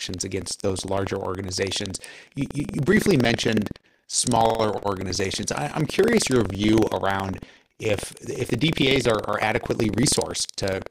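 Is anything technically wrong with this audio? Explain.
Yes. Buffer tearing runs throughout the speech, from start to finish. The writing program and the playback hardware have drifted so they cross inside every buffer period, leaving a small slice of each buffer, just under a tenth, filled with audio from about a tenth of a second earlier, hard-spliced on both edges. The result is a steady robotic rattle at 21.5 Hz, which fits a 2048-sample buffer, heard only while there is signal.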